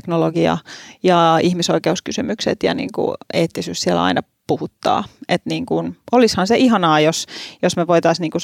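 Nothing in this speech recording stands out as a technical fault; the audio runs along without any dropouts, glitches or other problems worth pointing to.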